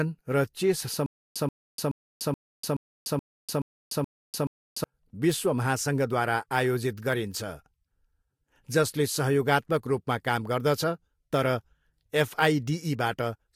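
From 1.06 to 4.84 s, a stutter with silent gaps: one 132 ms fragment repeats nine times, each followed by 294 ms of digital silence, until "विश्व महासङ्घद्वारा". Unlike a plain dropout, the same burst recurs evenly, likely from a stalled stream replaying its last buffer.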